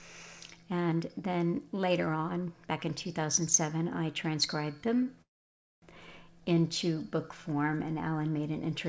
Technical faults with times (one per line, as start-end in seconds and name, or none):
5.04-5.08 short stall from a late packet
5.22-5.84 call audio freeze